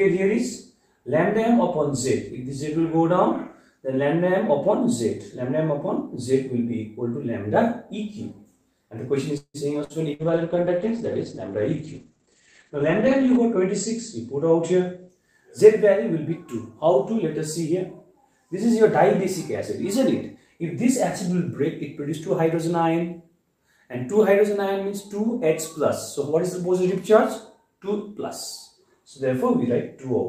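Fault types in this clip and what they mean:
call audio freeze: At 9.37 s the sound stalls for about 0.2 s. The last sound is held as a fading buzz or hiss, then about 60 ms of silence, before the audio picks up exactly where it stopped. About 168 ms has been inserted and nothing lost. The likely cause is packets held up in transit until the jitter buffer ran dry, so the receiver padded the wait and then resumed.
burst of packet loss: Twice, at 9.84 s and 10.14 s, the sound briefly turns into a short held buzz or dying hiss of roughly 55 ms, then jumps ahead. Each time about 60 ms of the original audio is skipped. A run of packets never arrived, or arrived too late to play. The receiver extended and faded the last sound to cover the hole, then carried on from a later point.
call bitrate drop: From 10.17 s to 15.15 s the sound turns rough, watery and dull. The top end is cut to about 8 kHz, down from about 20 kHz, and it is at its worst for around 3.2 s. 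The call's bandwidth estimate collapsed, forcing the encoder down from 48 to 12 kbps. At that rate it codes coarsely and discards high frequencies until the bitrate climbs back.
jitter buffer speed-up: The sound briefly rushes while its pitch stays put: at 20.34 s it plays about 15% fast for 0.3 s, and at 22.02 s about 7% fast for 0.85 s. The buffer had built up more audio than its target. To trim that delay the receiver cut out short pitch-period slices many times in a row, removing roughly 50 ms and 70 ms respectively.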